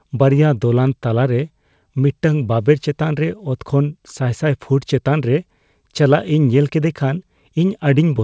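The speech comes through a wideband call path with no faults to report, its content ending at about 8 kHz in a way that fits a codec such as G.722.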